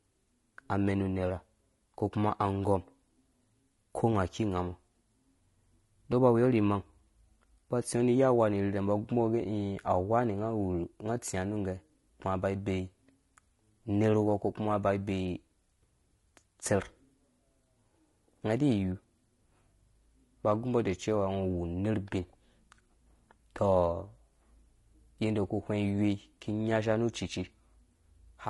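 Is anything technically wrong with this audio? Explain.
Yes. Low-delay AAC compression runs throughout the speech, likely from an AAC-ELD encoder. Its very short frames cannot separate the voice's pitch harmonics cleanly, so the voice sounds plainly rough and grainy, with noise filling between harmonics and a dulled, synthetic-sounding top band, which fits a bitrate around 32 kbps.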